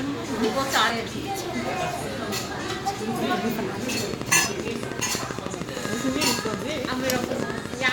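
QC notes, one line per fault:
0.89–0.91 s, 3.28 s, 4.45–4.48 s: compressed frames skipped. The decoder dropped runs of 10 ms frames, roughly 100, 70 and 150 ms of audio, so the sound leaps ahead.
4.14–7.90 s: train of clicks. Around fifty near-identical pulses arrive at a regular 12.9 per second, peaking about 15 dB above the sound, and are heard as steady ticking over it, likely from interference by nearby equipment or a faulty connection.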